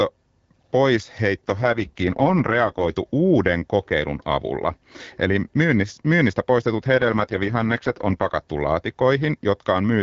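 Speech carried over AMR-WB suffers two AMR rate drops, at 1.47 to 2.97 s, ending just before "uuden kokeilun avulla", and 6.80 to 8.36 s. The sound turns rougher and more synthetic without losing bandwidth or breaking up, which fits a fall from 12.65 to 6.6 kbit/s.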